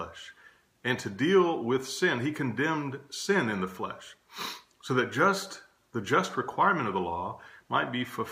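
No technical faults can be heard anywhere in the clip. Nothing in the sound points to a problem with how it was captured, processed or carried.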